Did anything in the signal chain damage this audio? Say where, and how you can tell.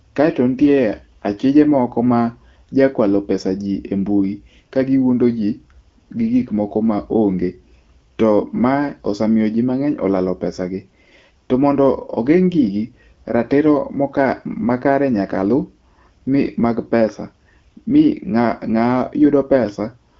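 No, nothing in the chain has damaged this speech recording. It has been through an AMR wideband (HD Voice) codec, with clear speech and only light coding texture that points to a rate around 12.65 kbit/s, and the band tops out near 7 kHz with the region above 6.4 kHz filled by shaped noise.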